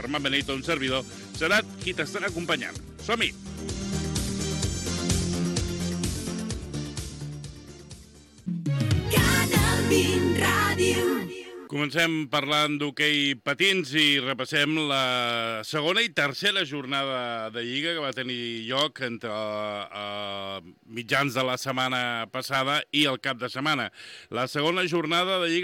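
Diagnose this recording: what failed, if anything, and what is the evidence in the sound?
Nothing in here points to a failure at any stage, and the sound holds steady all the way without a dropout, glitch or stray noise worth chasing.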